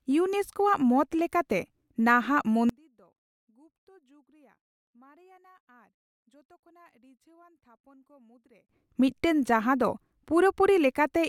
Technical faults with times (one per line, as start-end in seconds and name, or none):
2.69-8.69 one channel inverted